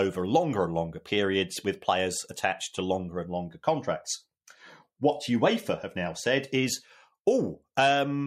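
Nothing stood out as a technical fault on listening to the speech in this recording.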